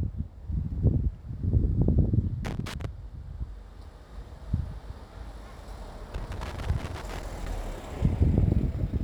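At 2.45 s a burst of loose connector crackle starts and runs to 2.85 s. A worn or dirty contact is making and breaking as it moves. The signal is chopped, and it sounds like irregular scratching.

The crackle returns at 6.14 s and lasts until 7.48 s, well over a second this time. Inside it, at 7.04 s, there is a single short blip from damaged data in a compressed stream. A stretch of the coded file is corrupt, so the decoder misreads a frame and loses sync. It then finds the next frame header and carries on. The result is a brief glitch within the crackle.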